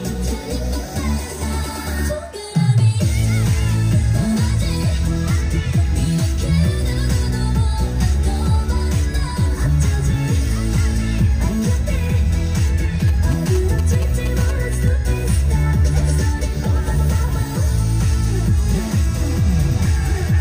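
GSM signalling bursts appear from 13.00 to 14.89 s. A 2G phone close to the recording chain is exchanging short control bursts with its network, and the audio circuitry rectifies that radio energy into the signal path. The result is a galloping dit-dit-dit run of short buzzes with a 217 Hz repetition, sitting roughly 15 dB below the programme sound.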